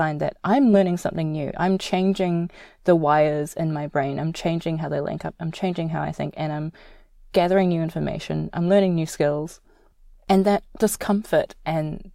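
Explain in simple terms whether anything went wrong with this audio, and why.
Nothing went wrong here: the speech signal stays intact and steady from beginning to end.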